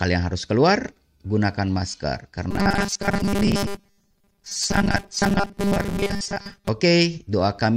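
Robotic sound from repeated short buffers runs from 2.51 s to 6.68 s in this speech clip, starting right after "harus keluar gunakan masker". The speech collapses into a rigid, metallic buzz at 200 Hz that only loosely tracks the words. The likely cause is audio arriving too seldom, so the player keeps looping a tiny slice of about 5 ms. Most of the real signal in that stretch is replaced by repeats.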